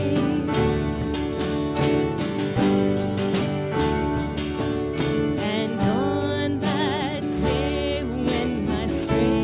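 From start to finish the sound has a gritty, metallic edge, with hissy and bright content turned into harsh, unrelated tones, and the spectrum runs hard up to about 4 kHz before stopping dead. This is aliasing. The rate was lowered from 48 kHz, apparently to 8 kHz, without first removing what lay above 4 kHz. Those upper frequencies folded back down around 4 kHz onto wrong pitches, roughly 20 dB below the main sound.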